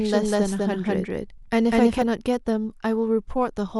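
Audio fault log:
0.0–2.02 s, doubled audio track: the speech has a second, equally loud copy trailing about a fifth of a second behind, dry and full-band, which cuts off abruptly at 2.02 s; likely a slower second capture path mixed in alongside the first.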